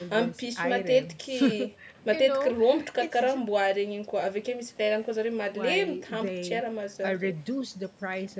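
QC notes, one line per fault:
No faults found in this speech clip. The call microphone processing can be heard in the audio's top end, with nothing above 8 kHz, and its high-pass filter trims the lowest bass as it normally does.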